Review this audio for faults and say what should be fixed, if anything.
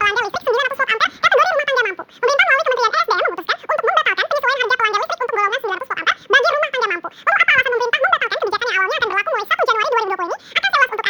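The audio is read two samples at a time throughout. It plays at double speed, a full octave high. Set the reader's channel count and sample width to match the file before decoding.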